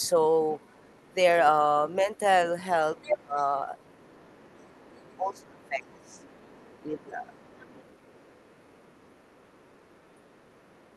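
Faint traces of the other side's voice leaking through appear at 0 s, from 0.51 to 1.14 s and from 2.03 to 2.19 s. From 2.97 s they run to the end. They sit roughly 30 to 40 dB under the speech. The likely cause is loudspeaker echo that the canceller left in the microphone signal.

Speech is suppressed in double talk from 3.12 to 3.38 s, 5.17 to 6.25 s and 6.86 to 7.79 s. The talker's level sinks by up to about 25 dB. The canceller likely mistook speech for echo while both sides talked.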